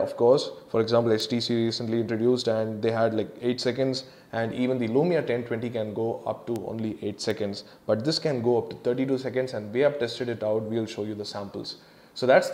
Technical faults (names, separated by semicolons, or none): bit error spike